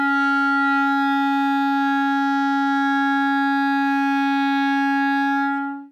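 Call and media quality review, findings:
No faults found on review of the music clip; nothing audible to log or escalate.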